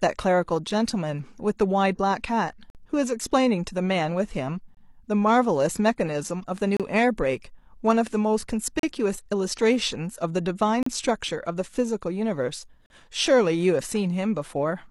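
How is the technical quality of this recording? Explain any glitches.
The recording has one recurring glitch: a gap between stream segments, seven times. There's a tiny 4 ms dropout at 0.7 s, then longer holes at 2.70, 4.75, 6.77, 8.79, 10.83 and 12.86 s, lasting roughly 48, 24, 31, 37, 35 and 41 ms. They land about every 2 s, matching the segment length. At each join the timestamps leave a small space, and the player pads it with silence, so the speech gets a hard-edged blank cut into it. Nothing is actually lost; the audio just resumes late.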